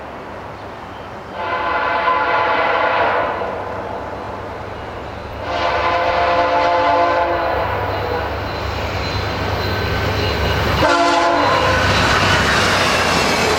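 At 4.25–4.27 s and again at 10.27–10.30 s, overlapping chunks produce a brief stutter. The audio was handled in 6-second blocks, and each new block began about 21 ms before the previous one finished, so that sliver plays twice at the seam. It is heard as a click or hiccup. On a waveform, a short stretch of cycles is duplicated with a discontinuity at the join. A spectrogram shows a thin vertical broadband line at each boundary.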